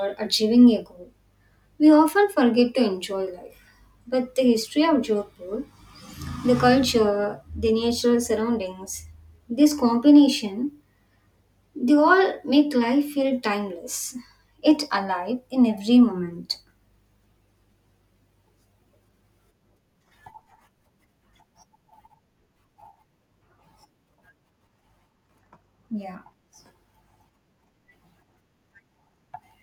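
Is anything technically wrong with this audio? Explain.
No, nothing technically wrong here.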